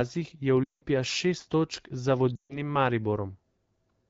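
Speech over an AMR wideband (HD Voice) link has lost AMR speech frames twice: at 0.63 to 0.82 s, just before "šest točk za", and at 2.36 to 2.72 s, just after "šest točk za". The decoder stretches the last good pitch and vocal tract settings while fading the gain. The sound drops to near silence within two frames, about 180 ms and 140 ms of missing audio, which fits runs of roughly nine and seven 20 ms frames. The voice then returns briefly thin. A plain dropout would cut to silence at once, with no stretched, fading tail.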